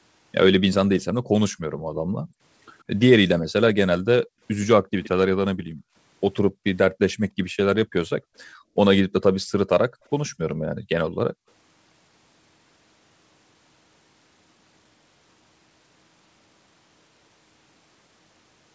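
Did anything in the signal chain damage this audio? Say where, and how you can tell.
Yes. The background is gated by the echo canceller, at the call-processing stage. The room sound dips at 1.22–2.35 s, by about 20 dB. It drops about 40 dB at 4.26–4.41 s, 5.55–8.76 s and 9.89–11.47 s. The canceller clamps the microphone while the loudspeaker plays.

An echo leak is also present in the call processing. A delayed copy trails the speech by 119 ms. It is faint at 2.28–3.0 s, about 35 dB down. It is louder at 4.23–5.09 s, about 20 dB down. This is likely residual loudspeaker pickup that the canceller missed.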